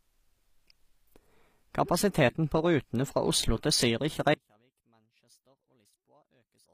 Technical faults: HE-AAC compression; one channel inverted

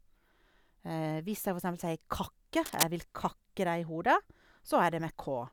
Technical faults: cable scratch noise

